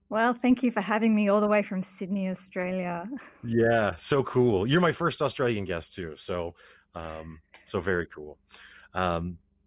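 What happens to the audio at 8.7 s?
Nothing goes wrong at 8.7 s; the speech carries on intact through that moment, with no dropout, click or other fault.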